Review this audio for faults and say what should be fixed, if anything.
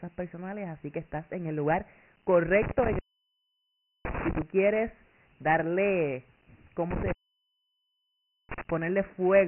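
The whole recording carries Dialogic VOX ADPCM damage, and it is heavy. Nothing survives above 3 kHz, and a gritty hiss trails the speech wherever it is voiced. The coder stores only a 4-bit step per sample and adapts its step size as it goes, so coarse quantisation error rides on the signal. The 3 kHz ceiling points to 6,000 samples a second, which fits a 24 kbps stream. To prevent this, capture and archive at a higher rate with linear PCM, and transcode to VOX only for final playback.

An intermittent contact drops the signal twice. From 2.62 to 4.42 s the line opens for about 1.06 s, ending just before "quieres darle". From 6.91 to 8.70 s it opens again, this time for about 1.37 s. Each dropout begins and ends with crackle as the contact breaks and remakes, and only faint hiss remains while the circuit is open. To prevent this, reseat or replace the suspect cable and connectors, and strain-relieve them before recording.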